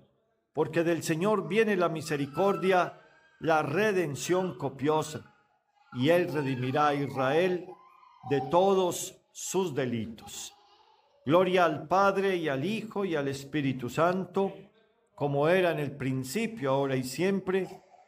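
No technical faults occur at any point in the audio, so there is nothing to describe in time order.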